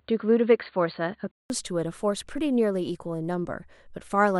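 Input switched to a poorer device, from 0.0 to 1.5 s: the speech has nothing above 4.6 kHz and a faint added noise well below the voice, likely from a narrower-band microphone, then a 187 ms silence before the fuller sound returns at the same level.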